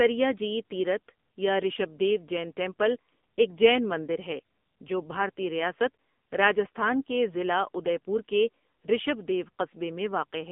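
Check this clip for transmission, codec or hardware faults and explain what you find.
One codec fault runs through the whole clip: AMR narrowband mobile codec coding. The speech has the closed, phone-line quality of a narrowband mobile call, confined to roughly 200 Hz to 3.5 kHz, with nothing above 3.6 kHz. The damage is heavy. The coder rebuilds each 20 ms frame from a vocal-tract filter excited by sparse pulses, and the harsh, buzzy, synthetic texture points to one of AMR-NB's low modes, consistent with about 6.7 kbps.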